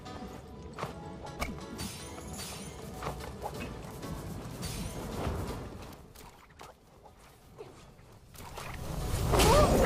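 Zipper noise, 8.19 to 9.13 s: the level shifts about 20 dB in unsmoothed steps of about 1 dB, roughly twenty a second, each ticking.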